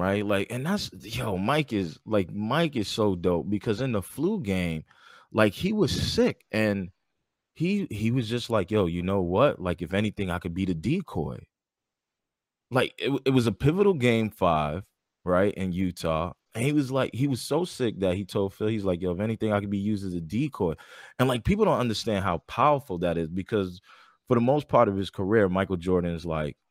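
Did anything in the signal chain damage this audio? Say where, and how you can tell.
No, nothing in the chain audibly damaged this recording.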